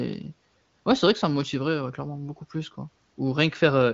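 There are no technical faults to describe in time order; the speech comes through the AMR wideband (HD Voice) codec at 18.25 kbit/s with its usual ceiling, nothing above about 7.6 kHz.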